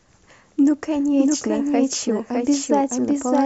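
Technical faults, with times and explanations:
Throughout: doubled audio track. A full-band second copy of the speech runs about 0.7 s behind at roughly equal loudness, likely from a second, slower capture path. Unlike an echo or reverb, it has no decay, no room colour and no fading repeats.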